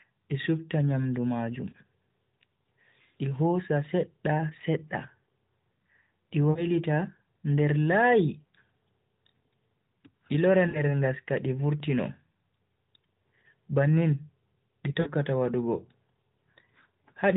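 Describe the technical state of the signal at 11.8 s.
At 11.80 s there is a block of digital silence lasting about 1.3 ms. A short run of samples drops straight to silence, which fits a 64-sample buffer left unfilled. The abrupt cut and return produce a single sharp tick.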